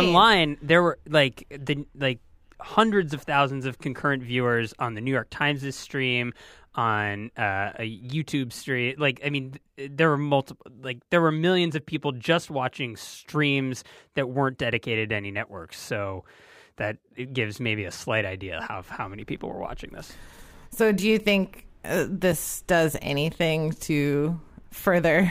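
No technical faults are audible.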